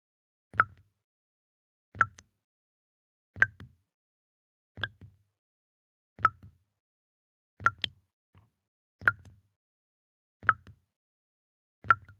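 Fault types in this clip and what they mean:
No faults can be heard.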